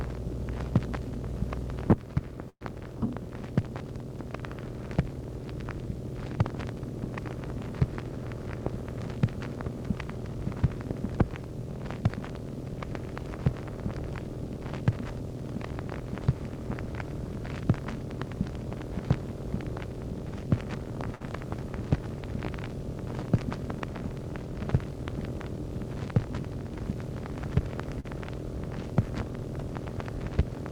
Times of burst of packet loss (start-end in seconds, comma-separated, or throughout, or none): 2.49-2.63, 21.15-21.22